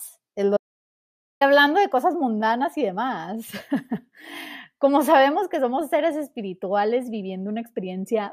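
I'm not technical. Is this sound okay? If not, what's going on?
No, there's an audio dropout to silence near the start. Right after "es lo", at 0.57 s, the speech cuts out completely, and it comes back at 1.41 s with "hablando de cosas mundanas". That's about 0.84 s of dead silence, not even the faint background hum of the room. The likely cause is that the input briefly got lost, like a loose mic or a link hiccup, while recording carried on. Whatever was said in that gap is gone.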